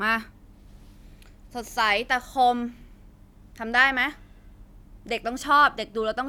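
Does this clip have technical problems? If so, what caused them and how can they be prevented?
No, there are no technical problems to point to in this speech recording. Since nothing went wrong, there is nothing here that needs preventing.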